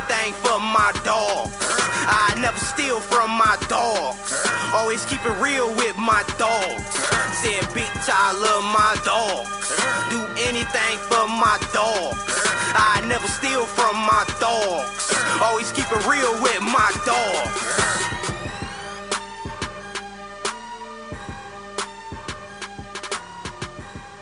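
Nothing is technically wrong with this audio.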